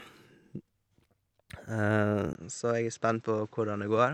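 At 2.33 s the speech turns dull and narrow after a brief 20 ms silence, and stays that way to the end at 4.13 s. This is most likely an input switched to a poorer device. On a spectrogram, energy above 8 kHz vanishes abruptly from that point, and a new noise floor, about 35 dB below the speech, appears. The waveform shows a tiny gap at the switch, then an overall level about 5 dB lower.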